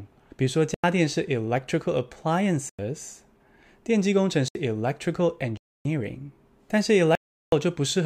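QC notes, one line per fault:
0.74–0.84 s, 2.69–2.79 s, 4.48–4.55 s, 5.57–5.85 s, 7.15–7.52 s: block of digital silence. The speech drops to silence and resumes with no fade. The 93 ms holes fit a 4096-sample block, and the 372 ms one fits 16384 samples, which points to output buffers not filled in time. On the waveform these are flat lines, and on the spectrogram they are clean vertical blank bands with a thin broadband stripe at each edge.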